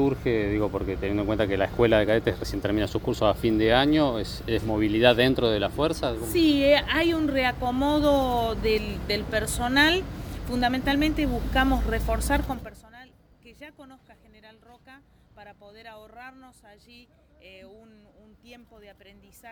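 No technical faults can be heard in this audio.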